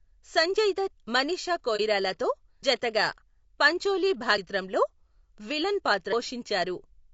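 Throughout the speech, low-delay AAC compression is plainly audible: the voice sounds rough and grainy, with noise filling the gaps between harmonics. This is likely AAC-ELD, whose short frames smear pitch detail at a bitrate around 32 kbps. A spectrogram shows blurred harmonic lines and hazy energy between them.

From 1.76 to 1.81 s, AAC frame loss with muting leaves a brief dip, which fits a single lost frame zeroed by the decoder. The overlapping windows taper the waveform smoothly down and back up, and the spectrogram shows a thin faded vertical strip.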